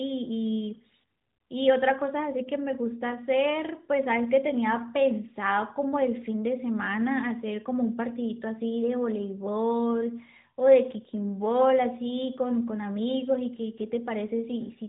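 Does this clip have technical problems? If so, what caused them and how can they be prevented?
No, there's nothing here that needs fixing or preventing; it's simply phone-band speech with nothing above 3.8 kHz, which is just how the AMR narrowband mobile codec carrying it is meant to sound.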